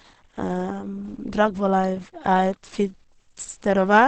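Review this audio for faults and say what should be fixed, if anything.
The speech is muffled and hoarse from start to finish, with nothing above 8.7 kHz and plainly audible codec damage. That's likely Opus compression dropping into its SILK speech mode, which fits a bitrate around 16 kbps squeezing everything into a wideband-only signal. To prevent it, give the Opus encoder a higher bitrate so it keeps the full bandwidth.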